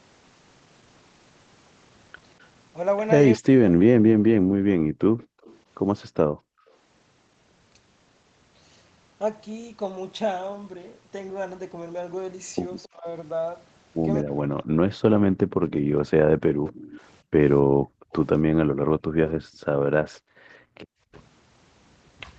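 From 3.35 to 4.12 s the talker's speech drops sharply, by roughly 40 dB at worst, for a bit under a second. This is likely speech suppressed in double talk: the echo canceller mistook overlapping talk for loudspeaker echo and turned it down. From 4.4 to 6.72 s the background is gated by the echo canceller, which clamped the microphone while the loudspeaker played, pulling room sound down by about 40 dB for around a second in total. Inside that span, from 5.18 to 5.57 s, a faint copy of the speech returns 256 ms late, far below the main level. That is likely echo leak from residue the canceller failed to remove. The same suppression likely returns from 12.86 to 14.86 s, cutting speech by roughly 35 dB. Gating comes back from 15.24 to 20.79 s, at about 40 dB for some three seconds in total. A louder echo, 278 ms behind, runs from 16.66 to 19.31 s. At 21.1 s a brief dropout of about 70 ms clips the speech again.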